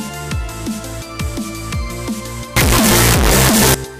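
From 2.56 s to 3.74 s the sound turns into very loud, harsh distortion. Quiet moments blare as loudly as the rest. The likely cause is signed and unsigned mixed up in the 8-bit samples, flipping the top bit so each zero crossing leaps across the full range.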